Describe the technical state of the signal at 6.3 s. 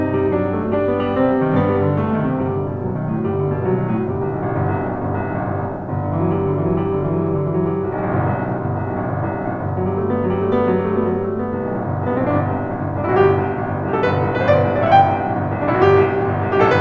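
At 6.3 s the music comes through intact, with no dropout, glitch or distortion, only the call path's usual band limit so that nothing is heard above about 8 kHz.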